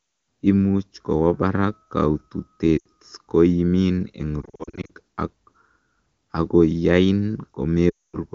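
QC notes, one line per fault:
2.78 to 2.86 s, lost AMR speech frames: the sound dips and drops quickly to near silence. Radio errors corrupted about 80 ms of frames, so the decoder held the last good pitch and vocal tract settings while lowering the gain.
4.41 to 4.91 s, lost AMR speech frames: the sound flickers with repeated short dips and warbles. Losses are scattered across about 480 ms, with no gap longer than 40 ms, so each one is patched over briefly.
7.90 to 8.16 s, lost AMR speech frames: the sound fades quickly to near silence and returns weak and rough. This is a solid 240 ms run. The wideband decoder's concealment decays fast, so the fade-out comes early.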